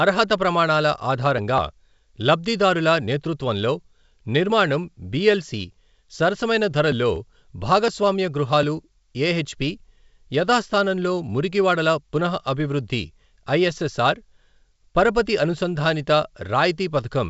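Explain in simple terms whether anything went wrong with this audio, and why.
Nothing went wrong here: the speech comes through the G.722 wideband telephone coding the way that kind of phone link is meant to sound, with nothing that stands out as a problem.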